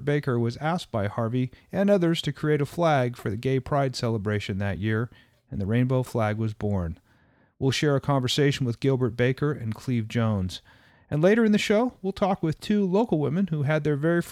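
Nothing here to flag, as there's no technical fault to be heard anywhere in the clip.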